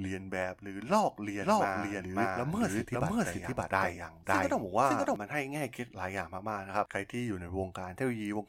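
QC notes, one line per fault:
1.42–5.16 s, doubled audio track: a second full-band copy of the speech runs about half a second behind the original at roughly the same loudness, so the two layers talk over each other. It is likely caused by the signal being captured again through a slower path or by an edit leaving two out-of-step copies. Unlike an echo or reverb, the copy has no decay and no room colour, and it cuts in and out abruptly at those times.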